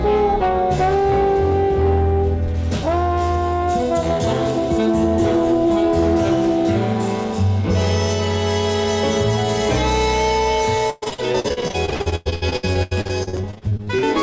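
From 10.90 s to 14.05 s the sound breaks up into repeated packet loss (robotic sound). Packets keep going missing, and each hole is filled by stretching out the last sound heard. About 40% of this stretch is patched this way, and the longest single gap is about 0.12 s. The result is choppy, with pieces missing. A spectrogram shows smeared, repeated slices and frozen harmonics, and the waveform shows short, regular-looking repeats between gaps. Nothing appears above 8 kHz, which fits the call codec's usual band limit.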